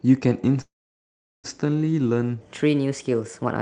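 A call audio freeze runs from 0.61 to 1.47 s. The likely cause is packets stalling in transit until the jitter buffer emptied. The receiver stretches the last sound into a brief fading buzz, then about 0.75 s of silence fills out a gap of roughly 0.82 s. When audio resumes it picks up exactly where it stopped, with nothing lost, so everything after runs about 0.82 s late.

A section at the wrong speed follows from 2.41 s to the end. Playback there is 1.24 times too fast, likely from the material being fitted to the wrong clock. Pitch and tempo rise together, lifting the speech by about four semitones, so it sounds higher and hurried. The Opus call path beneath both faults leaves a top end that stops near 8 kHz.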